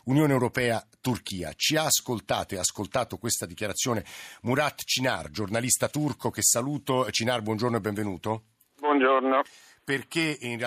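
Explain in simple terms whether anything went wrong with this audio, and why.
Gain pumping runs through the whole speech clip: the level gets pulled down whenever the talker gets loud, so loud and soft parts end up closer together and the sound is squashed. Likely cause: the input was set too high and a fast limiter kept pulling it down.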